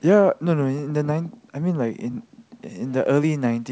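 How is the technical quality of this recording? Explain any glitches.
Nothing in this recording stood out as a glitch on listening.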